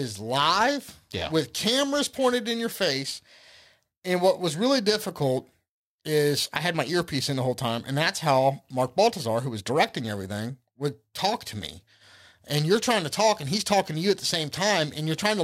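Periodic clock jitter runs through the whole speech clip: interference wobbles the converter's sampling clock at around 1.5 kHz, so every component of the speech gains sidebands spaced that far above and below it. The result is a rough, metallic edge, harshest on higher sounds, disappearing in pauses.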